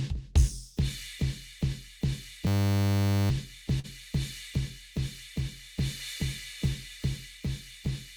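From 2.47 to 3.3 s the music freezes into a system hang loop. The driver stalled while the hardware kept replaying a 10 ms ring buffer, about 80 times. That short loop gives a steady 100 Hz buzz. Roughly 0.7 s of music is lost.

At 3.79 s comes a short stall from a late packet. A packet arrived late and the jitter buffer ran dry. The last sound is held for 44 ms, then the music resumes where it stopped. Nothing is missing, but playback now runs 44 ms later.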